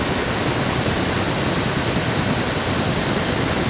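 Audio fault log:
Throughout: echo leak. A second, fainter copy of the speech trails the original by about 231 ms, sitting roughly 10 dB below it. The voice seems to repeat itself a quarter-second late, giving a doubled quality. This most likely comes from a loudspeaker on one end feeding back into its own microphone. The echo canceller there left part of that pickup in place, and it was sent back down the call. The narrow, telephone-band sound of the G.711 path carries the echo along with everything else.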